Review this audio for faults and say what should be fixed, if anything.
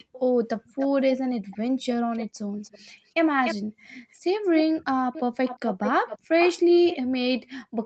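A delayed second copy of the speech trails the original at 0.13 to 0.19, 0.64 to 1.57, 2.13 to 2.26, 2.63 to 3.12, 3.44 to 3.55, 4.11 to 4.16, 4.56 to 6.97 and 7.45 to 7.50 s. It lags by 347 ms at first, then 296 ms, then 425 ms from 4.56 s on. It usually sits well below the main signal but comes close to it at 3.44 s. This is likely echo leak: one end had a loudspeaker feeding its own microphone, and that end's echo canceller let the leftover echo through to be sent back. Stronger echo cancellation at that end, or headphones instead of a loudspeaker, would prevent it.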